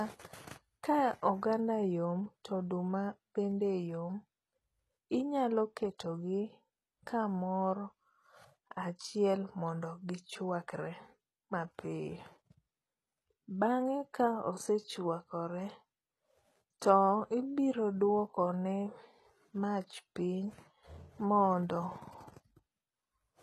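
The speech was likely squeezed through HE-AAC compression at a very low bitrate, around 16 kbps, leaving nothing above 12.4 kHz and rebuilt treble that makes s sounds gritty and metallic throughout.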